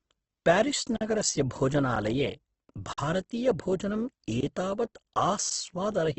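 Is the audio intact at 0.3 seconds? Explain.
No. At 0.3 s, as throughout, the speech sounds grainy and rough with nothing above 8.2 kHz, likely Opus compression filling bit-starved bands with noise.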